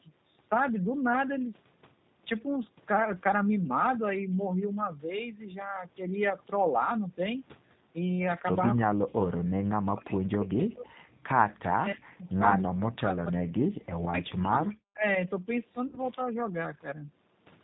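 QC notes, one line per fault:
Throughout: G.729 codec. The speech is rebuilt at 8 kbit/s from a vocal tract filter, pitch predictor and sparse pulses, so it sounds plainly rough and synthetic, with nothing above 4 kHz. Unlike a simple low-pass, the roughness comes from the coding itself, not only lost treble.
11.54 to 11.59 s: echo leak. A faint delayed copy of the far talker, about 35 dB below the speech and trailing by about 307 ms, slips through for a brief scrap, likely from a loudspeaker echo the canceller failed to remove. Its fixed lag separates it from reverberation.
11.6 to 12.46 s and 12.64 to 13.57 s: speech suppressed in double talk. The voice drops by up to about 40 dB, in pieces totalling roughly 0.7 s and then 1 s, likely because the echo canceller, hearing both sides at once, turned everything down. The level dips and returns, with no buzz, unlike packet loss.
15.87 to 15.99 s: VoIP packet loss concealed by the speech codec. 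About 60 ms of audio, which fits three lost 20 ms packets, is filled by extrapolating the last pitch and filter, giving a stretched buzzy tone or coloured noise that fades, and the voice stays weak or distorted briefly after. The smeared fill distinguishes it from a clean dropout.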